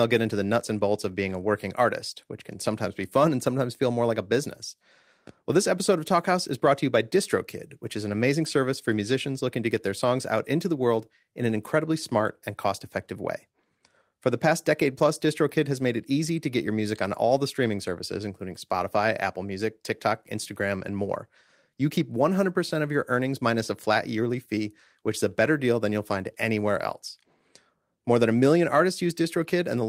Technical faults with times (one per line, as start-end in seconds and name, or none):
none